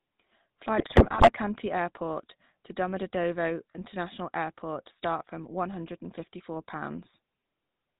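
The whole clip has gone through the GSM full-rate codec, and you can hear it plainly from the first syllable. The voice has that buzzy, gravelly edge, because the codec rebuilds speech from a vocal-tract model fed with a thinned-out train of excitation pulses rather than the real waveform. Nothing above 4 kHz survives, so the top end is gone. The overall grain fits the old 13 kbps full-rate coder.

Then from about 0.78 s to 1.30 s there's a burst of GSM bit errors, roughly half a second of the decoder being fed corrupted data. The damage sounds like a fairly dense error rate, a few percent of bits. When flipped bits land in the filter, pitch or gain parameters, each affected frame comes out with a warped spectrum or a sudden jump in level. Across that stretch the speech breaks up into squawks, pops and a gargling, bubbly mess before the clean-decoded codec sound returns.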